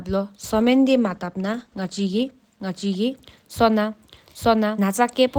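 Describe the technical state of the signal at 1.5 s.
At 1.5 s the speech is inside a call bitrate drop lasting from 0.41 to 2.39 s. The encoder's budget falls from 32 to 15 kbps, held at the low rate for about 1.9 s. Coarser coding and trimmed highs make the speech sound rough and muffled.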